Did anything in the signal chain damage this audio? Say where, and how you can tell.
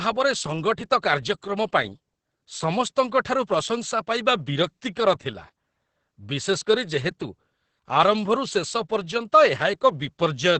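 Yes, at the codec stage. Opus voice compression runs through the whole speech clip, working in its SILK linear-prediction mode at wideband. Nothing is present above about 8.5 kHz, and the damage is heavy, which points to a bitrate around 10 kbps. With so few bits, the coder quantises the excitation coarsely. Instead of clean glottal pulses and noise, the voice comes out muffled, hoarse and faintly robotic.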